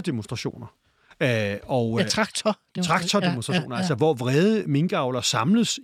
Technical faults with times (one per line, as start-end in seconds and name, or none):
2.10 dropped buffer (overrun)
3.58 dropped buffer (overrun)